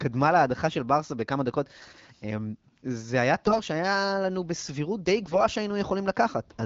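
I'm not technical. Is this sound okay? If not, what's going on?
No. Twice, from 3.45 to 3.60 s and from 5.22 to 5.43 s, there are AMR bit errors: over a weak phone link carrying this HD Voice (AMR wideband) speech, roughly one bit in ten of the finer detail arrived flipped. Checks on the key parts still passed, so it played anyway. The voice keeps its pitch and loudness but briefly turns hoarse, scratchy and gargly.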